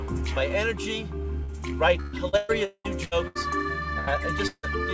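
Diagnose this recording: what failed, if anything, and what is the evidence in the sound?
The network is where this goes wrong. At 1.44 to 1.51 s there's short concealed packet loss: about 40 ms never arrived, so the receiver carried the last sound forward and blended back in, leaving a quick smear. The band stopping at 8 kHz fits a G.722 call path.

From 2.00 to 3.38 s it turns into repeated packet loss (robotic sound). There are six separate gaps, the longest about 0.2 s, and nearly half that span is patched. Each patch restarts from the last fragment before the next hole hits, so it comes out choppy, with pieces missing.

At 3.99 to 4.10 s there's a burst of packet loss of about 80 ms. The concealment holds the last sound and turns it down as the gap runs on. Playback then resumes slightly further along, with that piece simply gone.

At 4.47 to 4.66 s the sound is stretched out for about 160 ms, fades, and sits in roughly 60 ms of silence before audio returns past the missing stretch. 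That's likely a long network dropout, where the receiver's fill ran dry.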